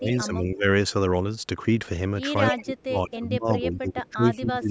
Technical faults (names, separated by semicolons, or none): speech suppressed in double talk; echo leak